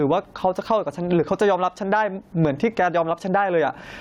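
This speech clip has gain pumping from start to finish. The gain swings by about 15 dB. Loud and quiet passages sound squashed together. The likely cause is input gain set far too high, with a fast limiter clamping down.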